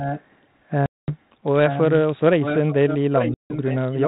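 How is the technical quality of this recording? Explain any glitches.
The recording has two recurring problems: a quieter delayed double of the speech and two abrupt dropouts. The whole clip sounds like a 32 kbit/s G.726 phone channel, band-limited to 4 kHz with a light coding grain.

Echo leak, from 0.0 to 0.23 s, 1.68 to 1.99 s and 2.42 s to the end: a quieter copy of the speech trails the original by 885 ms, roughly 10 dB down. The likely cause is a far end on loudspeaker whose echo canceller let part of the microphone pickup through and sent it back down the line.

Packet loss on an ADPCM call, at 0.86 to 1.10 s (220 ms) and 3.34 to 3.54 s (160 ms): the speech cuts out into hard-edged silence. When it resumes, it is slightly distorted before it settles. The gap lengths suggest runs of around ten and seven lost packets. The decoder's adaptive predictor and step size lost track of the sender during each gap and needed some tens of milliseconds to realign.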